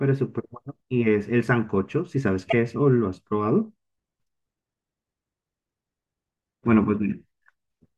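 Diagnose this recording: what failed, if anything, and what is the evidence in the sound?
A broken MP3 bit reservoir at 2.50 to 2.54 s in this speech, at the codec stage, is the likely cause. The speech jumps ahead with a 44 ms glitch, matching 26 ms MP3 frames: after missing frames, the next frame borrows reservoir bytes and reads another frame's data.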